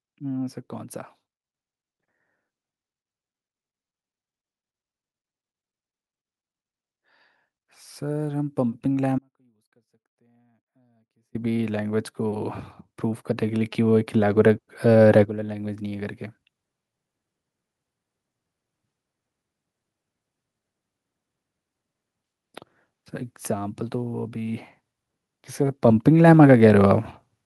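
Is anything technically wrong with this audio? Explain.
Yes. Automatic gain rising occurs three times: the gain control judged the input too quiet and gradually raised its gain, by about 8 dB from 7.62 to 12.6 s, about 6 dB from 13.47 to 16.21 s, and about 4 dB from 25.36 to 27.0 s. Speech and background swell together each time.

An audio dropout to a faint residue runs from 9.19 to 11.35 s. The signal was likely lost upstream while the path after the break stayed live. The speech cuts out abruptly for about 2.2 s, leaving only a faint sound roughly 35 dB below normal level, then returns just as suddenly.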